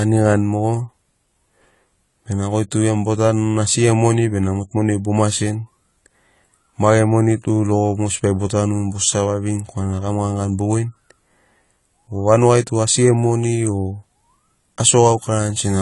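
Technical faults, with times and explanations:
Throughout, AAC compression: the speech is audibly dull and smeared, with nothing at all above 11.4 kHz, and there's a warbly, fizzy texture on sustained sounds and sibilants. That's likely AAC-LC at a low bitrate, something like 32 kbps, where the encoder pulls the cut-off down and quantises each frame's spectrum so coarsely that bands drop out or get filled with stand-in noise, which is what gives the sound that hollow, swirly edge.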